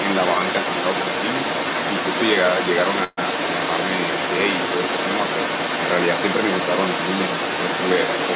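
From the start at 0 s to the end of the clip at about 8 s, a second voice runs underneath the main speech, at roughly the same loudness. This is the other side's voice leaking through: the far end was most likely playing from a loudspeaker near the microphone, and the echo canceller let a good share of it pass back into the outgoing audio, all of it confined, like the main speech, to the band below 4 kHz that the call codec allows.

At 3.04 s the audio stalls for about 0.15 s, to 3.19 s. The last sound is stretched into a short fading buzz of roughly 130 ms, ending in a brief moment of silence, and then the speech picks up exactly where it stopped with nothing skipped. That is a call audio freeze: packets were most likely delayed in transit, the jitter buffer drained, and the receiver filled the wait before resuming, which shifted everything after it later by about 130 ms.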